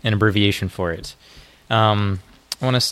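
Nothing stood out on listening to this audio.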